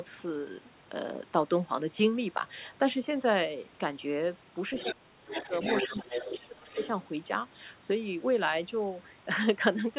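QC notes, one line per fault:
4.76–4.95 s, 5.28–6.40 s and 6.74–6.89 s: other side's voice leaking through. A second voice sits under the near talker, nearly as loud (only about 5 dB down) in the first two stretches and much fainter, about 15 dB down, in the short last scrap. The likely cause is far-end audio from the loudspeaker reaching the microphone and getting past the echo canceller.
4.83–5.53 s and 5.87–6.77 s: speech suppressed in double talk. The near talker's level pumps down by roughly 25 dB in the first span and around 20 dB in the second. About half a second and then about 0.7 s of speech are affected, and the voice dips. Both spans overlap the leaking far-end voice. Likely unable to separate the two talkers, the canceller attenuates everything, so the wanted speech collapses while the other side is active, heard over a narrowband path with nothing above 4 kHz.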